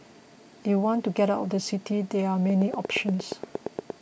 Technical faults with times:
2.50-3.91 train of clicks

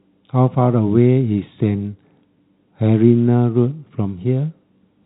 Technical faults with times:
none

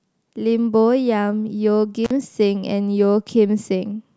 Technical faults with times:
2.05-2.11 intermittent contact

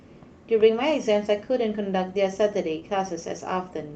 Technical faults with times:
2.79-2.83 short concealed packet loss

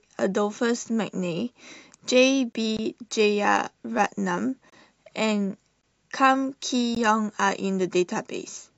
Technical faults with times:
2.53-2.55 gap at a join of encoded pieces
2.77 gap between chunks
4.70-4.72 gap at a join of encoded pieces
5.81 gap between chunks
6.95 gap at a join of encoded pieces

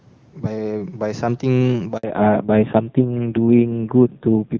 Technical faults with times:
1.97-2.03 handover gap
2.03-4.60 fallback to narrowband

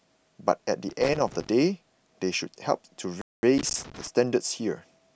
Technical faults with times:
0.89-1.49 loose connector crackle
3.21-3.43 playback stall
3.58-4.07 loose connector crackle

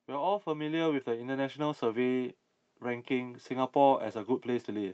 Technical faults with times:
0.05-2.25 automatic gain rising

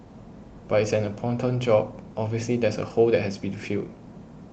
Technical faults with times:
none

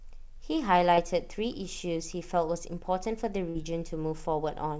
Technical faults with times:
0.95-1.00 short concealed packet loss
3.49-3.58 burst of packet loss

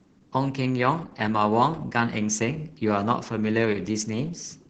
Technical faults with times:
0.00-4.69 Opus voice compression

